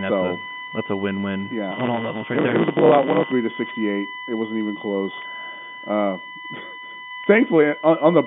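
A USB whine runs through the whole recording, a fixed tone at 1 kHz with its strongest part at the 2 kHz harmonic, roughly 15 dB below the speech. The bus polls in 1 ms frames, and that current leaks into the audio through power or ground. On a spectrogram it shows as thin, perfectly straight horizontal lines at 1 and 2 kHz, unbroken by pauses, sitting inside the 150 Hz to 3.6 kHz telephone band of the G.711 line.

From 1.71 to 3.32 s there is a block size mismatch (truncated). One stage hands over longer blocks than the next stage takes, and the tail of each block is discarded, which fits 512-sample writes. The speech races ahead by a factor of 1.16 while its pitch stays about the same, and a 109 Hz buzz rides on it from the repeated cuts. A waveform shows small jumps at each splice, about 9.2 ms apart, and the spectrogram shows vertical striping at that spacing.

Packet loss with pitch repetition occurs twice, at 5.22 to 5.24 s, just after "wasn't even close", and at 7.24 to 7.26 s. 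Each gap is 20 ms, which fits one dropped packet. The receiver fills it by looping the last pitch period, so the sound briefly holds and buzzes. On the waveform these spans appear as repeated cycles, and on the spectrogram the harmonics are frozen flat for that instant.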